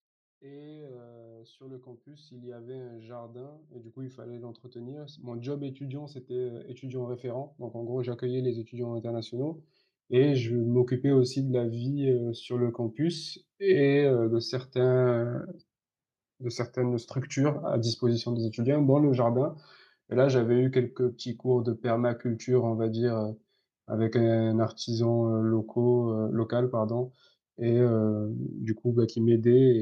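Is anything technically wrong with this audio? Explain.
Yes, there's one problem. From about 0.4 s to 13.05 s you can hear the automatic gain rising: the level control decided the input was too quiet and kept pushing its gain up, by about 26 dB in total. It's a slow climb, so the speech and the room noise behind it swell together over those thirteen seconds, and the background gets noticeably louder along with the talking rather than staying put.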